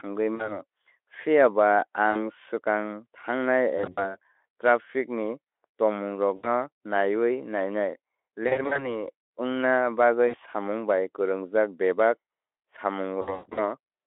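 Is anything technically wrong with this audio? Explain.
Yes. VoIP packet loss concealed by the speech codec occurs at 0.35–0.61, 2.11–2.22, 3.77–4.16, 6.35–6.49, 8.47–9.03, 10.27–10.36 (just before "samung bai") and 13.21–13.62 s. Speech drops out for 40 to 260 ms, longest at the end. The decoder fills gaps from its last pitch and filter, producing fading buzzy smears and weak speech afterward.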